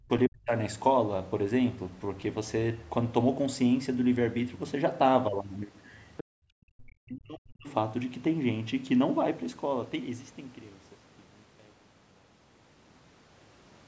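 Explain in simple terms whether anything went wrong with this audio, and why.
A couple of things went wrong, both the kind of thing that happens on a call. First, speech suppressed in double talk: the voice gets pushed way down, almost to nothing, right at the start (0 to 0.1 s), again from 0.27 to 0.53 s, and for a longer stretch from 6.42 to 7.68 s. The likely cause is the echo canceller getting confused when the other person talked over this one. It couldn't tell the real talker from the loudspeaker echo, so it turned everything down.

Second, there's a brief bit of the other side's voice leaking through, around 6.17 to 6.24 s, just before that longer dropout. It's a faint scrap, quite a bit quieter than the main voice. That's likely the far end playing out of this person's speaker and the echo canceller not scrubbing all of it from the microphone, so a little sneaks into the recording.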